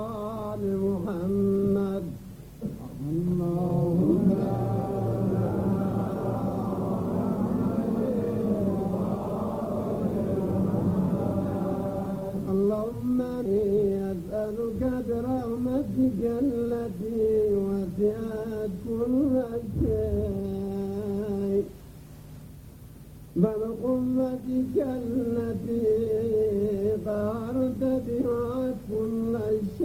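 Right at 13.45 s the audio does a skip ahead: it jumps forward with no gap at all, and about a second of material is simply gone, with the two sides butted straight together. That's the receiver dropping a chunk of audio that had already piled up behind it, either lost on the way or thrown out when the jitter buffer overflowed, so playback lands on later audio and the delay shrinks by roughly that second. Right after, from 13.55 s to 15.67 s, there's a jitter buffer speed-up. The sound runs at about 108% speed while keeping its pitch, so it comes across slightly rushed for those two seconds. The buffer was still holding more than its target after the late audio bunched up, so it kept snipping out tiny pitch-period-sized slices, about a fifth of a second in total, to pull the delay back down.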